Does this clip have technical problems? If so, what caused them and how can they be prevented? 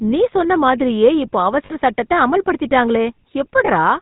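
Yes. The whole recording carries the GSM full-rate codec's buzzy, gravelly roughness and a 4 kHz bandwidth limit, consistent with 13 kbps pulse-excited coding of the speech. Prevent it by using a wideband codec such as AMR-WB or Opus.

Lost GSM frames appear at 1.66–1.71 s and 3.66–3.69 s as a brief metallic ring, where the decoder repeated the last good frame, which fits two lost frames and then one. Prevent it with more reliable transport or stronger channel error protection.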